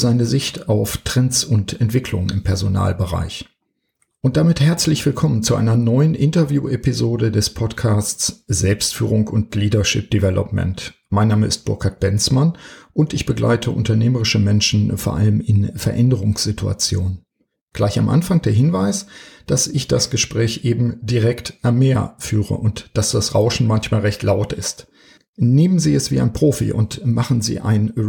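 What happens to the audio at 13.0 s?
Nothing goes wrong at 13.0 s; the audio plays through that moment intact, with no dropout, click, glitch or other technical fault.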